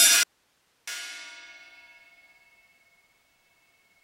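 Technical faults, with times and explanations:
0.23–0.87 s, audio dropout to a faint residue: the sound cuts out abruptly for about 640 ms and returns just as suddenly, with no fade at either edge. The gap is not silent. It holds a steady hiss roughly 45 dB below the normal level, so the chain after the break kept running while the wanted signal was missing. The likely cause is a brief loss of the source feed, with the downstream input left open and passing only its own noise floor.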